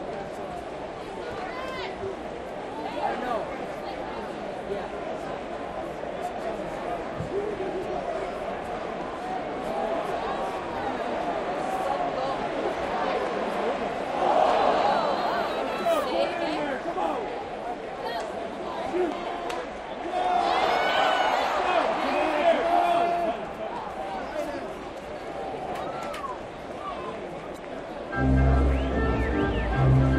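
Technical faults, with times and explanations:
27.54–27.58 s, damaged data in a compressed stream: a short stretch of the encoded file holds wrong or missing bytes, so the decoder misreads those frames and loses sync until it finds the next valid header, leaving a brief 40 ms glitch in the sound.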